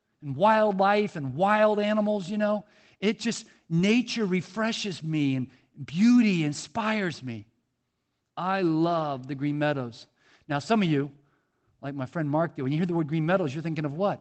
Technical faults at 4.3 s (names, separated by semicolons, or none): none